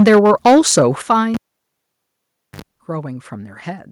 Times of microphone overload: 0.00-0.82

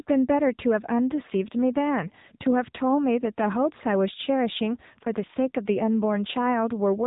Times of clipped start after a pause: none

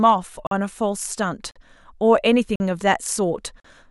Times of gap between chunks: 0.47-0.51, 1.51-1.56, 2.56-2.60, 3.60-3.64

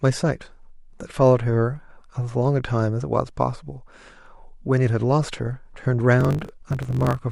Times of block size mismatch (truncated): 6.19-7.19

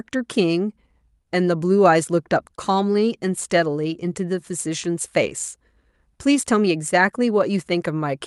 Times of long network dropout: none

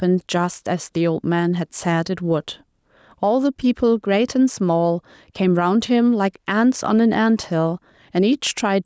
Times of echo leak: none

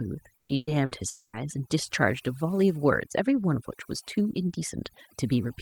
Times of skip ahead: none

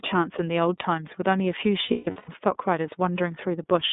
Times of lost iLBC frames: 1.85-2.29

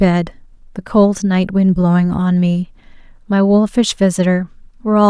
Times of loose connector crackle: none

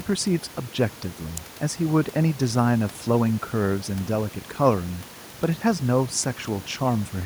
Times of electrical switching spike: 1.37

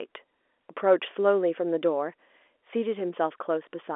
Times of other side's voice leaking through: none

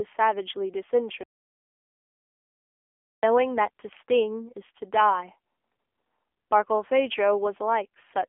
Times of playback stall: 1.23-3.23

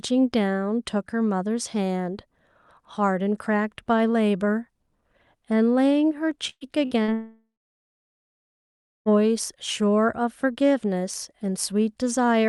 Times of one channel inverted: none

